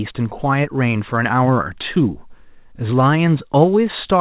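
No technical faults are present in this speech recording, which has come through a call path whose band stops at 4 kHz, consistent with a narrowband telephone codec such as 64 kbps G.711 A-law.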